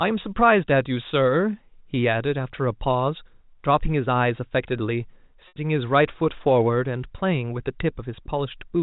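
At 5.48 s the speech briefly freezes into a held, slightly buzzy tone that fades into silence, the gap lasting about 80 ms, until 5.56 s. This is packet loss with pitch repetition: the receiver looped the last pitch period to cover a gap that fits roughly four 20 ms packets, over the narrowband G.711 telephone coding.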